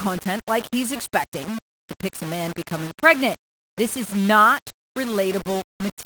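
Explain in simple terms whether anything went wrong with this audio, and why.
Low bit depth without dither runs through the whole clip, from start to finish. The speech sounds grainy and rough, and the grit rises and falls with the voice itself, clearest in the softer moments. The likely cause is that the audio was stored with very few steps of loudness, which fits about five bits, and each value was rounded to the nearest step with no masking noise added, so the rounding errors follow the sound.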